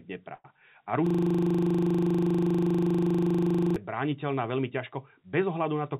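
From 0.34 to 0.46 s the speech smears into a short fading buzz ending in a brief silence, then resumes with nothing lost: a call audio freeze, likely from delayed packets draining the jitter buffer. From 1.07 to 3.76 s a 40 ms fragment repeats dozens of times as a steady 25 Hz buzz before "brániteľná veľmi", a system hang loop where the computer stalled while the sound hardware kept replaying its buffer. Throughout, the audio stops at 4 kHz, which fits a telephone codec such as G.711.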